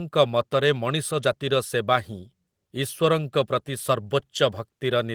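This speech clip has a lost packet rebuilt from error correction at 3.53 to 3.55 s. The 20 ms stretch, which fits a single lost packet, plays without a gap but sounds briefly rougher and noisier, decoded from a low-bitrate copy. On a spectrogram it appears as a narrow smeared, grainier slice; the waveform stays continuous.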